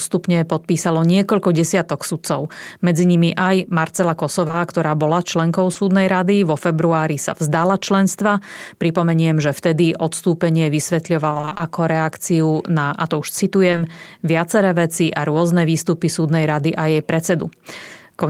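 At 4.47 to 4.55 s, just before "ktorá bola členkou", the sound briefly smears and wobbles. This is short concealed packet loss: two consecutive 20 ms stretches arrived too late to decode. The receiver filled each one by extending the preceding sound and then crossfaded back into the real signal. The same brief smear returns at 5.73 to 5.77 s, right after "ktorá bola členkou", where one 20 ms hole was patched over.

Between 11.29 and 11.61 s the sound turns choppy, with fragments dropping out. This is repeated packet loss, producing a robotic sound. Eight separate holes, none longer than 20 ms, land so close together that about half of this 0.32 s stretch is synthesized rather than received. Each patch continues the last sound, and the next loss arrives before the real audio can settle. The 20 ms hole size fits 20 ms packets.

At 13.71 to 13.79 s, between "na a to už" and "viaceré veci a rôzne", another brief smear is audible. 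This is short concealed packet loss again, with two back-to-back 20 ms holes filled by extrapolation.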